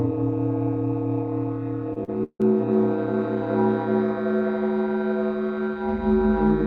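From 1.93 to 2.44 s the music breaks up with repeated packet loss, giving a robotic sound. Four gaps land in about half a second, the longest 158 ms. Each hole is patched by stretching the preceding audio forward, so roughly 44% of the stretch is concealed rather than real. It sounds choppy. On a spectrogram the harmonics freeze into flat, smeared bands with hard vertical edges, and the waveform shows repeated, looped-looking blocks.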